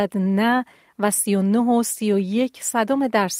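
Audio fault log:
No faults are heard anywhere in this speech recording.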